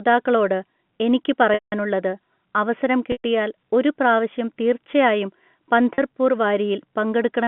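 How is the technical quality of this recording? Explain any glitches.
The recording has two problems: a converter clock fault that adds roughness from early on, and three dropouts where lost packets were patched over. The G.711 telephone band, roughly 150 Hz to 3.4 kHz, comes through as expected.

Sample clock jitter runs from about 0.43 s to the end. The converter's clock wanders by a few microseconds, so each sample is captured slightly early or late. The resulting error is largest where the waveform changes fastest, and overall it sits around 35 dB below the signal. It is heard as a grainy hiss riding on the speech that grows on louder and brighter sounds and drops away in pauses.

Packet loss with pitch repetition occurs three times: 1.54 to 1.72 s, 3.12 to 3.18 s, and at 5.94 s. The stretches of missing audio last 180 ms, 120 ms and 40 ms, which fits 20 ms packets. At each gap the receiver loops the last pitch period and fades it over roughly 50 ms. 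The two longer losses become a brief buzzy hold that sinks into silence, then the speech cross-fades back in. The 40 ms loss is heard only as a short, slightly frozen buzz.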